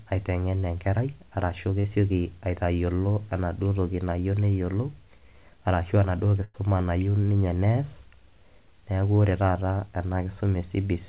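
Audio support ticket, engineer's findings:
Short concealed packet loss at 0.60–0.64 s, just before "enkerai arashu", and at 1.80–1.86 s, right after "aitengen enkerai arashu". Brief smear/wobble, 20 ms and 40 ms of audio missing and filled by continuing the last sound, then a blend back. Distinct from a burst: no held buzz or fading hiss.

Burst of packet loss at 6.44–6.56 s. About 100 ms missing, concealed by extending the last sound while turning it down: sustained buzz or decaying hiss, then audio resumes further on. More material is skipped than in the short losses. Call path band-limited to 4 kHz throughout, fitting G.711 A-law at 64 kbps.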